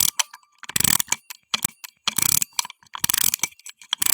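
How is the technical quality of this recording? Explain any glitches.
One glitch stands out: a CD skip from 1.66 to 1.69 s. The audio cuts out for a brief mute of around 30 ms, then resumes from a different point. The laser has jumped to another turn of the disc's spiral, so playback continues out of sequence. A plain dropout would also go silent but pick up where it stopped. Here the sound after the gap doesn't join smoothly with what came before.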